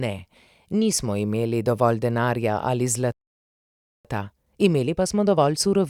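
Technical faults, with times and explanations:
3.12 to 4.05 s, playback stall: the player most likely ran dry of buffered data or had its output thread blocked, so right after "imeli dovolj denarja ali" the speech cuts to silence for about 0.93 s before resuming where it left off.
4.05 to 5.90 s, time-compressed catch-up: to work off the backlog built up during the stall, the player drops small slices of audio and cross-fades the joins, so the remaining speech runs about 1.15 times too fast at unchanged pitch.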